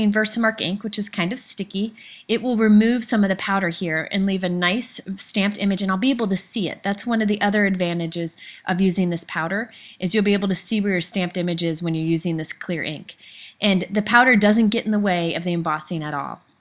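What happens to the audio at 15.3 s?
Nothing goes wrong at 15.3 s; the audio plays through that moment intact, with no audible fault.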